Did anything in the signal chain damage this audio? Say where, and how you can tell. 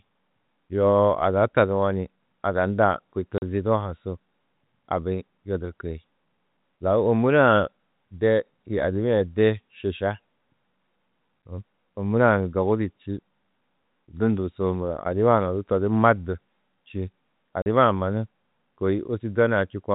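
Yes. The speech drops out abruptly twice, from 3.38 to 3.42 s and from 17.62 to 17.66 s. Each gap is a 40 ms hole of dead silence, bounded by hard edges. This is packet loss filled with silence at the network stage. Audio went missing in transit and the receiver played silence in its place. The matching 40 ms length fits two consecutive 20 ms packets. The audio is limited to the 4 kHz telephone band of the G.711 coding.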